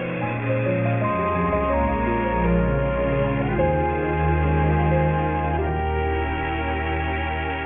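Aliasing runs through the whole clip. The spectrum stops hard at 3 kHz, which fits a drop to a 6 kHz sample rate with no filtering beforehand, so content that lay above 3 kHz has folded back down to unrelated pitches. It sits roughly 20 dB below the wanted sound and gives bright parts a gritty, metallic edge. Simple band-limiting would only dull the top; here the folded tones are inharmonic and move opposite to the true pitch.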